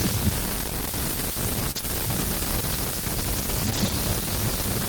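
Between 1.71 and 3.91 s, scattered short gaps occur: about three packets arrive lost or late, 60 ms missing in total with none much over 30 ms. The receiver extends the preceding speech to cover each hole, leaving brief ticks and smeared hiccups.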